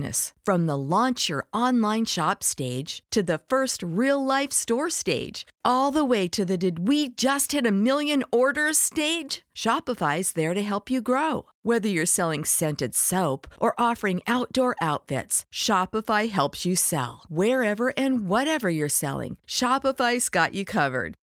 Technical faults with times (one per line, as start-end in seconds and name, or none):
none